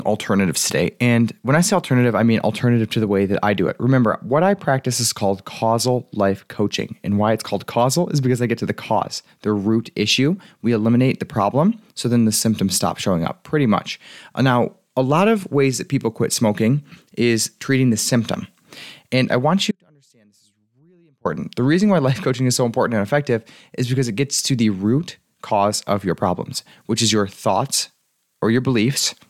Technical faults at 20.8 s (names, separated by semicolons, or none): audio dropout to a faint residue